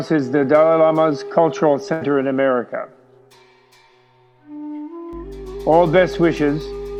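At 1.93 s a burst of packet loss removes about 80 ms of audio. The receiver stretches and fades the last sound for roughly 76 ms before playback jumps ahead. From 5.13 s to the end, mains hum sits underneath: a steady 50 Hz tone from power-line coupling, around 20 dB below the signal.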